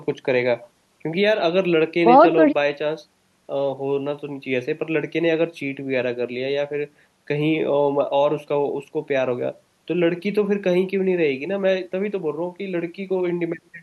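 Nothing in the recording stood out as a technical problem on listening.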